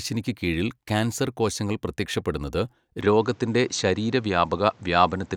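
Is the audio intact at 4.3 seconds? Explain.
No. From 3.01 s to the end, the input has likely switched to a poorer device, so the speech loses everything above 8.3 kHz and gains faint new background noise.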